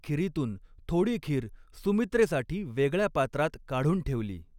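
Nothing stood out as a technical fault on listening to this speech recording.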